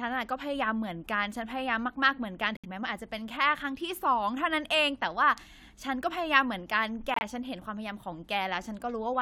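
At 2.57 s and again at 7.14 s the speech drops into abrupt silence for about 90 ms each time: corrupt frame muted. Damaged compressed frames were rejected by the decoder and replaced with silence. Each gap fits roughly three consecutive frames, and timing stays intact.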